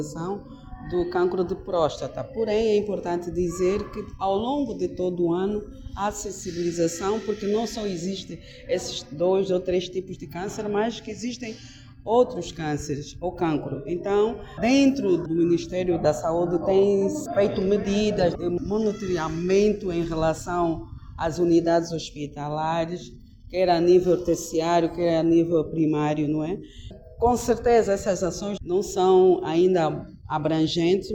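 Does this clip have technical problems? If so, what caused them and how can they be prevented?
No, nothing in this clip stands out as a technical problem, so there's nothing here that needs preventing.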